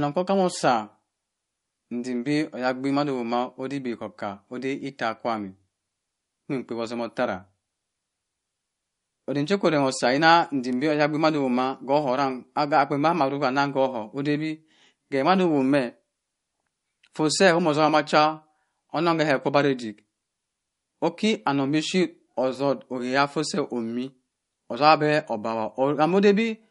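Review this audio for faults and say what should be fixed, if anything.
Plainly audible MP3 compression runs through the whole speech clip, likely from encoding at a low bitrate, which fits something near 48 kbps. Nothing remains above 11.1 kHz, and the sound turns watery as weak frequency lines drop in and out between frames. Encode at a higher bitrate or keep an uncompressed master for editing and delivery.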